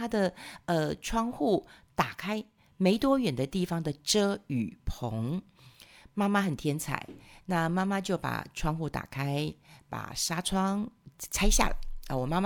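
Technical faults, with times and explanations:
2.20 to 2.58 s, sudden gain jump: the speech and its background noise both drop by about 4 dB in a single sample and come back at 2.58 s, likely a gain setting applied without a ramp. The waveform envelope steps down and up; the spectrogram dims evenly across all frequencies, noise floor included, with sharp vertical edges.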